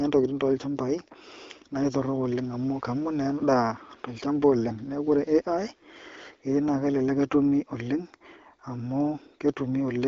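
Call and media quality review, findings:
No faults found on the speech path; AMR-WB (HD Voice) at 12.65 kbit/s working as expected, content band-limited at about 7.5 kHz, consistent with the wideband codec.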